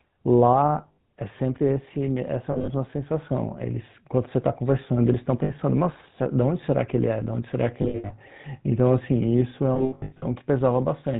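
Throughout, the speech carries the buzzy, gravelly roughness of the GSM full-rate codec, plainly audible and consistent with its 13 kbps rate. The codec rebuilds the voice from a vocal-tract model driven by a sparse, regularly spaced pulse excitation, so fine detail is lost. On a spectrogram, everything above 4 kHz is empty, and the harmonics below look smeared and grainy rather than cleanly striped.

Lost GSM frames break in at 0.78 to 0.98 s, 2.52 to 2.68 s, 5.44 to 5.51 s, 7.82 to 8.11 s and 9.74 to 10.24 s. At each point the decoder repeats the last good frame's settings, so the sound is held as a rough, metallic ring. Gaps run from 60 ms to 360 ms in total and are scattered in patches. The longest unbroken runs reach about a tenth of a second, near the end. The waveform shows repetitive stretches, and the spectrogram shows frozen horizontal bands.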